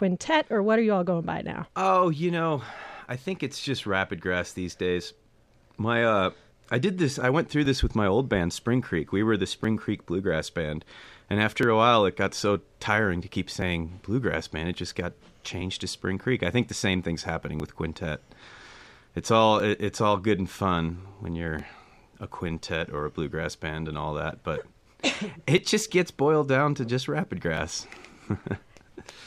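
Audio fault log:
1.65 to 27.57 s, periodic USB or driver dropouts: starting just after "all going by now", a tick recurs every 2.0 s, roughly fifteen in all, each where about 4 ms of audio is skipped outright. A background task stalling the bus or driver on a fixed schedule breaks the waveform, producing evenly spaced clicks.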